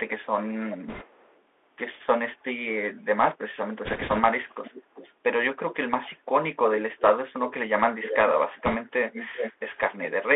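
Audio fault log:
throughout: Bluetooth CVSD headset codec. The audio is confined to roughly 300 Hz to 3.5 kHz, with nothing of the upper range surviving, which fits a 64 kbps one-bit-per-sample stream. Each bit only nudges the waveform up or down by an adapting step, so fast, loud high-frequency movement outpaces the step and smears. Sibilants come out gritty, and a grainy hiss sits beneath the speech. The damage is plainly audible.
0.2–1.37 s, 3.5–5.15 s, 6.77–10.07 s: echo leak. A delayed copy of the speech trails the original by about 0.38 to 0.39 s, growing from faint in the first stretch to clearly present in the second and nearly as loud as the direct sound in the last. This is likely a far-end loudspeaker whose echo canceller let part of the pickup through and returned it down the line, giving a doubled, ghosting repeat.
0.88–1.05 s, 3.85–4.20 s, 8.66–8.76 s: bit errors on a Bluetooth voice link. 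Short bursts of rushing, crackly noise ride over the speech, consistent with an error rate of around 3 percent. Because each flipped bit in the one-bit stream moves the signal by only one step, whose size grows with the speech level, and the decoder recovers quickly, there are no sharp clicks. The result is a brief gravelly roughening that clears once the burst ends.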